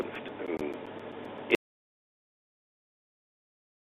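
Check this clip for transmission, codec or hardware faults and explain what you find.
One fault is present: an audio dropout to silence starting at 1.55 s and running to the end of the clip. The sound cuts off abruptly mid-flow and what follows is silence, with no room tone or background hiss left underneath. The likely cause is that the input was lost, through a disconnected device, a failed link or an accidental mute, while the recorder kept writing silence, so whatever came after that point is gone.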